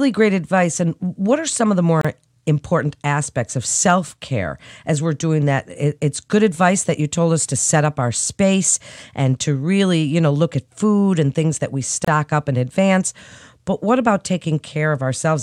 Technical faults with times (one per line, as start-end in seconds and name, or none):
2.01-2.05 gap at a join of encoded pieces
12.05-12.08 gap at a join of encoded pieces